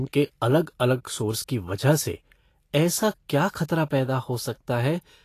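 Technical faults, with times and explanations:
Throughout: Vorbis compression. The speech carries a hissy, grainy sheen, with consonant onsets blurred, and nothing at all above about 14.2 kHz. The cut-off removes the highest treble. Below it the treble is quantised so coarsely that fine detail turns into noise of similar energy, which gives the rough texture. The damage is plainly audible and fits a low-bitrate encode of around 37 kbps, likely a Vorbis encode.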